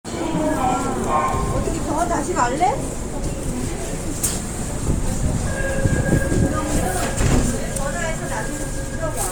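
A recording of everyday sounds, likely passed through Bluetooth LC3 compression for its whole length, at a rate that fits 48 kbps with 10 ms frames. The codec's effect is plainly audible as a grainy, noise-filled upper range, with nothing above 20.1 kHz.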